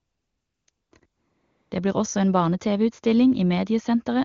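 Between 0.00 and 0.67 s, 0.71 and 0.91 s, 0.99 and 1.01 s, and 1.05 and 1.71 s, AMR comfort noise replaces the real background. The phone judged these stretches silent and sent no speech frames, so the receiver substituted synthetic, steady noise that switches in and out.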